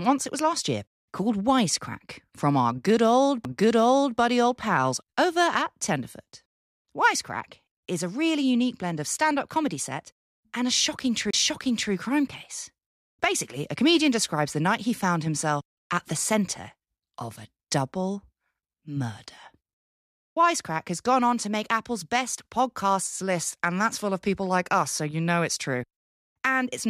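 A CD skip occurs at 3.45 s and again from 11.31 to 11.34 s. In each case the laser jumped off its track onto another turn of the disc's spiral, so the player briefly muted and resumed reading from a different point. The first mute lasts only a couple of milliseconds and registers as a sharp tick; the second silences the sound for about 30 ms before the audio picks up again out of sequence.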